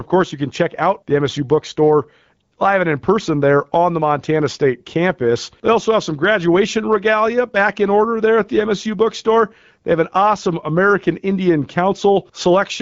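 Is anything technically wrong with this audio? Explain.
No, nothing technically wrong can be heard here.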